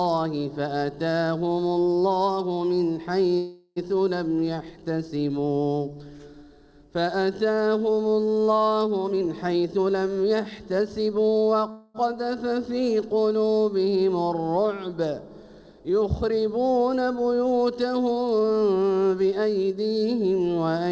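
At 3.38 s the audio stalls for 0.38 s. The last sound carries on as a fading buzz or hiss and then resumes exactly where it left off. This call audio freeze likely comes from delayed packets emptying the jitter buffer. Unlike a dropout, it inserts a gap rather than losing anything.

From 9.04 to 11.43 s a jitter buffer speed-up runs the audio at 116% speed, trimming roughly 0.4 s in tiny pitch-period slices. The pitch stays put, so it sounds hurried rather than raised as a resampling error would.

At 11.71 s a second freeze adds 0.23 s of the same fading buzz or hiss before the audio continues intact.

From 18.39 to 19.71 s the sound is rushed again at 117%, with about 0.2 s removed, all within the call codec's band, which has nothing above 8 kHz.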